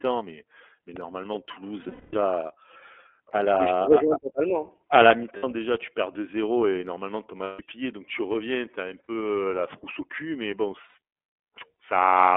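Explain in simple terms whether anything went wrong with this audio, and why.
Two things went wrong. The whole recording passed through the iLBC codec, a phone-style voice compressor. It cuts everything above about 3.4 kHz and below 300 Hz, so the speech sounds thin, muffled and slightly rough or robotic. Unlike plain low-quality audio, it has a synthetic graininess.

There are also lost iLBC frames, where pieces of the signal went missing in transit. The decoder filled each gap by repeating the last bit of voice, so the sound briefly freezes into a held, buzzy vowel. The worst is at 1.83 to 2.15 s, with gaps scattered across about 300 ms and the longest lasting around 200 ms. Shorter ones occur at 5.37 to 5.44 s, 7.44 to 7.61 s, 9.04 to 9.09 s and 10.89 to 10.95 s. Unlike a plain dropout, there is no silence, and the speech recovers almost instantly.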